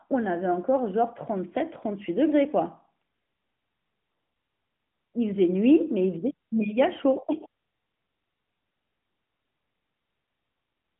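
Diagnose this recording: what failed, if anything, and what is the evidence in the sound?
Nothing stood out on listening; no stage of the chain shows a failure.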